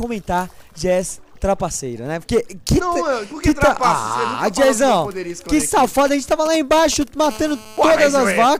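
A nearby 2G phone exchanging only brief signalling bursts with its network, rectified by the audio circuitry, produces GSM signalling bursts from 5.60 to 7.27 s: a galloping dit-dit-dit of short buzzes at the 217 Hz burst rate, roughly 15 dB below the audio. The phone then settles into a call and transmits in bursts 217 times a second, giving GSM phone buzz from 7.31 to 8.39 s, a steady, hard, raspy 217 Hz buzz rich in harmonics, about 21 dB below the audio and unrelated to it.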